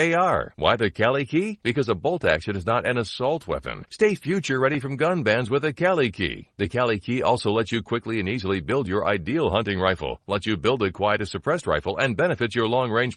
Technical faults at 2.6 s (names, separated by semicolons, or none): call bitrate drop